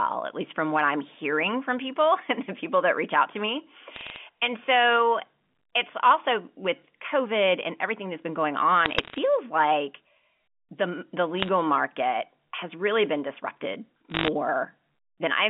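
Bit errors on a digital phone line, single flipped bits in the G.711 A-law stream, corrupt isolated samples, and hits on sign or high bits snap into sharp ticks. Bursts of crackle land at 3.96–4.16 s after "reach out to me", at 8.86–9.18 s, at 11.40–11.49 s between "the the" and "market has really been", and at 14.10–14.28 s after "has really been disrupted".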